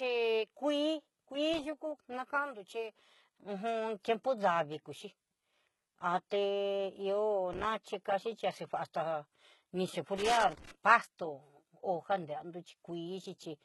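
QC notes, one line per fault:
throughout, HE-AAC compression: Heavy codec damage and nothing above 11.8 kHz, likely from HE-AAC at a rate near 16 kbps. Rebuilt treble leaves s sounds gritty and metallic.
1.53–1.64 s, 7.53–7.65 s, 10.17–10.71 s, loose connector crackle: Irregular bursts of scratching crackle. A contact keeps making and breaking, chopping the signal. The last burst runs longest.
6.30 s, pre-echo: A brief hiss spreads about 11 ms before an attack. Block coding noise fills the quiet moment ahead, softening the onset.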